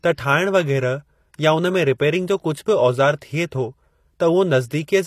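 Throughout the clip, the audio was likely coded with HE-AAC, which transmits only the lower spectrum and synthesises the treble by copying lower bands upward under a coarse envelope. The damage is plainly audible: the rebuilt highs don't line up harmonically with the speech below them, so s sounds come out gritty and metallic, and nothing remains above 14.9 kHz. The degree of damage points to a low bitrate around 24 kbps.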